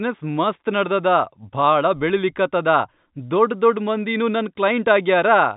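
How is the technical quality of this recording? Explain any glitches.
The technical quality holds up, with no glitches to explain in this speech recording.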